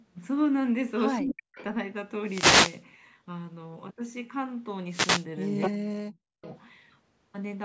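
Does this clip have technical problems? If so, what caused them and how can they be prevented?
Yes. The clip has three kinds of fault.

Speech suppressed in double talk occurs from 1.2 to 1.58 s and from 5.69 to 6.47 s. The level drops sharply, by as much as about 40 dB at its deepest, over roughly 0.4 s and 0.7 s. This is likely an echo canceller treating simultaneous talk from both ends as echo and attenuating the whole signal, including the near-end talker. Prevention: use a full-duplex-capable canceller with better double-talk detection, or a headset at the far end.

Echo leak appears from 1.28 to 1.64 s and from 5.6 to 5.71 s as a copy of the speech arriving 250 ms late. The first instance sits roughly 10 dB below the direct speech, and the second is about as loud as the speech itself. The likely cause is a loudspeaker endpoint whose echo canceller failed to converge fully on its room path, so residual playback returned through its microphone. 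Prevention: use headphones at the loudspeaker end, or lower playback volume and improve the canceller.

A wireless microphone noise hit occurs from 2.23 to 2.84 s and from 4.89 to 5.26 s, heard as a swish of static over the signal. Multipath reflections cancelled the FM carrier at the receiver, so its noise floor surged during each fade. Prevention: use diversity receivers, keep antennas in line of sight, and shorten the distance to the transmitter.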